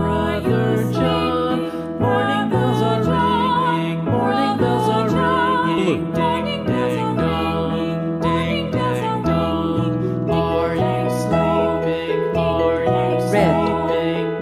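No technical faults can be heard anywhere in the audio. There is no moment in the sound that calls for a fault description.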